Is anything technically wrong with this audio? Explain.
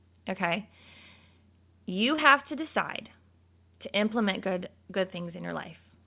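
Yes. From 2.16 to 2.20 s, just before "to decide", there is a short concealed packet loss. About 20 ms of the call's audio arrived too late for the decoder, so the receiver patched the hole by extending the preceding sound for roughly 17 ms before blending back into real audio. It is heard as a brief smear or wobble, not silence. That fill is what separates it from a plain dropout, which would leave an audible hole. The audio is also band-limited to 4 kHz, as expected from a G.711 mu-law call path.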